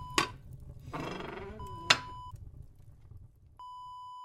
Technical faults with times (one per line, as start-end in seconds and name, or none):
none